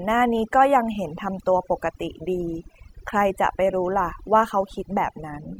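From start to finish the speech carries overdone noise removal: a noise reducer set too aggressively cuts individual frequency bands near its noise estimate, taking quiet speech detail with them. Gaps fall to near silence with twinkling specks, and a spectrogram shows scattered isolated dots between ragged speech bands.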